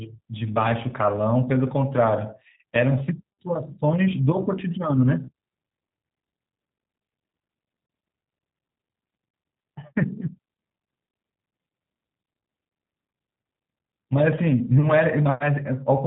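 The whole clip carries G.729 codec damage, plainly audible. Speech is rebuilt from a vocal tract model and sparse pulses at about 8 kbit/s, so it sounds rough, synthetic and capped at 4 kHz.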